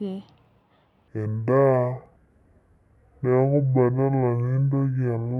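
From 1.08 s to the end, the speech suddenly drops into a deep, dragging register, with everything stretched out and pitched about ten semitones lower. This is a section at the wrong speed: playback runs at 0.567 times the original rate, so timing and pitch fall together at that instant. The likely cause is an editor or player reading this stretch against the wrong clock, slowing it to just over half speed.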